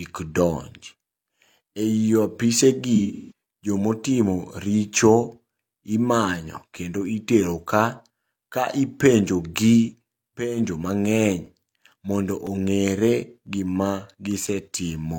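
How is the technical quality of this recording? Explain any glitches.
The recording has two distinct glitches, one early and one near the end.

From 2.95 to 3.32 s there is AAC frame loss with concealment. About 256 ms of data went missing across a 341 ms stretch, with the longest gap around 150 ms. The decoder patched the gaps from the last good spectrum, so the speech turns smeared, noisy and phasey.

From 11.46 to 14.47 s come periodic USB or driver dropouts, spaced 1.0 s apart, about four in all. Each time, a background task stalled the audio path and a few milliseconds were replaced by silence, giving regular ticks over the speech.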